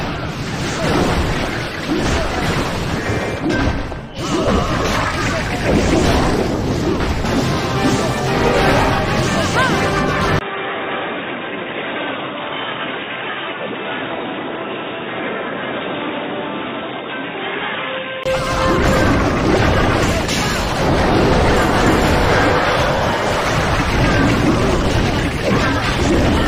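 At 10.39 s the sound drops out for about 20 ms, then comes back dull and boxy, roughly 10 dB quieter, with nothing above 3.8 kHz and a faint new noise floor, until 18.26 s. That's likely an input switched to a poorer device.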